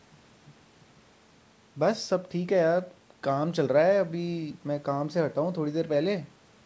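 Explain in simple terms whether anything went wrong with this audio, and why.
Nothing went wrong here: the speech just carries the ordinary marks of a call, with the microphone processing trimming the deepest bass and the call codec leaving nothing above 8 kHz, which is how this kind of call connection normally sounds.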